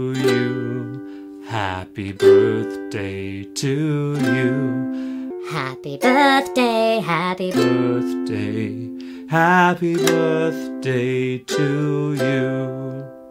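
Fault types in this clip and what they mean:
Section at the wrong speed: from 5.30 to 7.54 s the sound plays 1.38 times too fast, so it turns hurried and rises about five semitones, with pitch and tempo shifting together. The likely cause is an editor or player running that stretch on the wrong clock.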